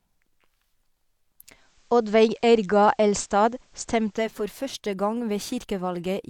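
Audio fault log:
1.37–4.50 s, digital radio blending to analogue. The receiver lost the digital signal and cross-faded over about 415 ms to the FM broadcast, then back. Faint hiss appears, roughly 40 dB below the speech. The level shifts by about 2 dB.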